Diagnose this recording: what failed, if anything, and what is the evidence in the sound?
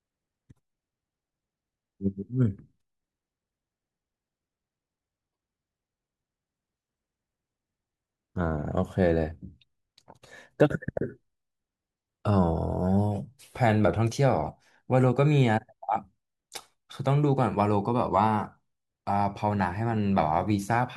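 The failure sits at the codec stage: damaged data in a compressed stream, heard as a brief glitch from 5.29 to 5.32 s in the speech. Corrupted bytes there left the decoder unable to read those frames correctly, so it lost sync and misread or dropped audio until it found the next valid frame header. Unlike a network dropout, which gives silence or a smoothed concealment, this burst comes from the decoder misreading the compressed data itself.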